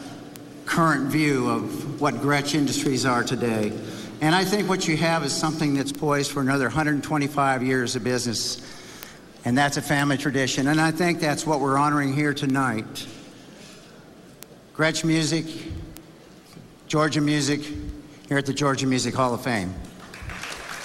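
From 0.17 s to 20.78 s, a steady run of ticks sounds roughly five times a second, around a hundred in all. These are word clock ticks: the receiving device's clock drifts from the sender's, an error of about 100 ppm, so each slip drops or repeats one sample.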